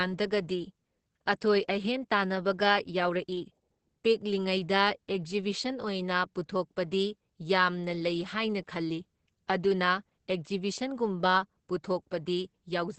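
Throughout the clip, the speech carries Opus voice compression with heavy damage. Nothing survives above about 8.6 kHz, so sibilants lose their edge and the voice sounds muffled, hoarse and faintly robotic, which fits the SILK linear-prediction coder running near 10 kbps and describing the excitation coarsely. A spectrogram shows a flat ceiling across the whole clip, with smeared, blocky harmonics that suggest 20 ms coding frames.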